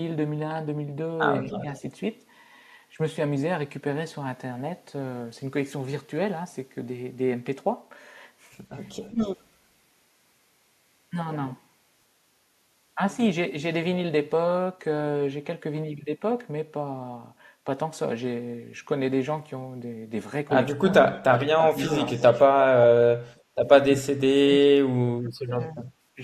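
At 1.4 to 1.82 s, the echo canceller likely cannot separate the talker from loudspeaker echo during double talk, so the speech is suppressed in double talk, dipping about 5 dB for a brief stretch. From 1.52 to 1.8 s, a far-end loudspeaker echo likely escapes cancellation, an echo leak heard as a faint copy 208 ms late at about 20 dB below the speech. Between 9.03 and 9.37 s, residual echo likely passes the canceller again, leaving a fainter echo leak 267 ms behind at about 30 dB down. Within it, at 9.1 to 9.2 s, double-talk suppression likely clamps the near side, taking about 10 dB off the speech. From 20.71 to 22.39 s, the canceller likely mutes both sides during overlap, making the speech drop in pieces by about 25 dB. Across 20.89 to 22.43 s, leaked loudspeaker echo is likely returned, giving a clearer copy 267 ms late at about 15 dB below the speech. From 23.88 to 26.19 s, heavy double-talk suppression likely cuts the speech by about 35 dB, so roughly 2 s of it is chopped out or nearly silenced.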